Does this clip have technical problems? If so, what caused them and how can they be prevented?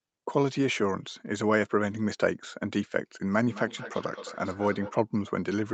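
Yes. From 3.32 to 4.97 s there is feedback echo between two devices. A second device in the same room is playing this call aloud, and this microphone picks that playback up again. Its own echo canceller only removes what its own loudspeaker plays, so the returning sound passes through untouched. The speech comes back roughly every fifth of a second, thinner and more ringing with each pass, peaking at about 13 dB below the direct speech. To prevent it, mute or leave the call on all but one device in the room, or use headphones.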